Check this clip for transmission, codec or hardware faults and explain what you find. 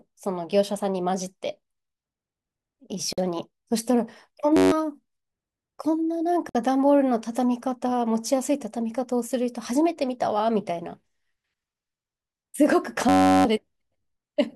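The speech has two kinds of fault, each occurring twice.

A gap at a join of encoded pieces opens at 3.13 s, lasting 49 ms, and again at 6.49 s, lasting 55 ms. The pieces were encoded separately and joined without trimming, so each encoder's start-up delay and end padding stayed in as silence. The speech drops out with smeared edges and then resumes exactly where it left off. Nothing is repeated or lost, which tells it apart from a dropout.

A system hang loop runs from 4.57 to 4.72 s and from 13.09 to 13.45 s. The system froze while the sound hardware kept replaying the same 10.67 ms stretch, which fits a 512-sample buffer. It repeats 14 times in the first loop and 34 in the second. The result is a steady buzz at 93.8 Hz rather than silence, and about 150 ms and then about 0.4 s of speech never return. The unchanging pitched tone separates it from a gap.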